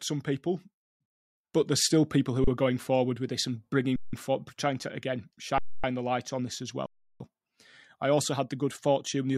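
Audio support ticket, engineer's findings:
Underrun with held sample, 2.44 s (34 ms, after "but there's still people"), 3.96–4.13 s, 5.58–5.84 s, 6.86–7.20 s. The output buffer runs dry and the converter holds its last value, so the sound flattens into silence without a click. Nothing is dropped, and playback resumes softly where it stopped. The second and fourth gaps fit 8192- and 16384-sample blocks at 48 kHz.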